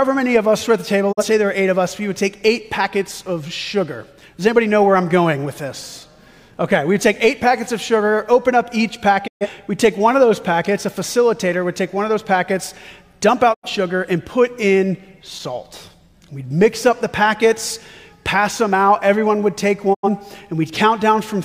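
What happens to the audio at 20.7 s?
Nothing goes wrong at 20.7 s; the audio there plays through intact, with no dropout, click or other fault.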